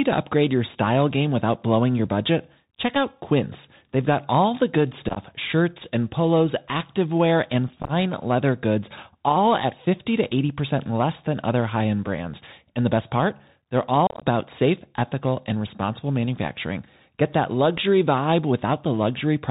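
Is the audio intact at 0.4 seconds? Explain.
No. At 0.4 s, as throughout, the speech carries Bluetooth CVSD headset codec damage: one-bit up/down steps with an adapting step size, consistent with a 64 kbps link. Nothing passes above 4 kHz, s sounds turn scratchy, and granular hiss sits underneath, unlike a plain band-limit.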